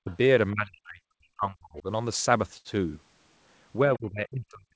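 At 0.04 s, an echo canceller that likely could not tell the talker from loudspeaker echo while both sides spoke pulls the speech down for about 50 ms, a dip of roughly 15 dB: this is speech suppressed in double talk, heard as a brief duck in level.

From 0.10 to 0.16 s, the other side's voice is leaking through, most likely because the canceller left some of the loudspeaker signal in the microphone feed. It sits about 30 dB under the speech, a faint scrap behind the talker.

From 0.53 to 1.86 s, speech is again suppressed in double talk, and much harder. The canceller, likely caught by simultaneous talk, cuts the speech by as much as about 40 dB over roughly a second and a half, so it fades, thins and breaks into pieces.

Between 2.57 and 2.79 s comes a short stall from a late packet. The jitter buffer ran dry and the receiver stretched the last sound for 74 ms until the data arrived. Nothing is lost, but one sound hangs on too long with a slight buzzy smear, and playback runs about 74 ms later afterwards.

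From 3.86 s to the end, speech suppressed in double talk returns. The canceller, likely reacting to both sides speaking at once, drops the speech by up to about 40 dB, leaving it dipped, dulled and chopped to the final moment. Throughout, nothing is heard above 8 kHz, as expected from the G.722 call path.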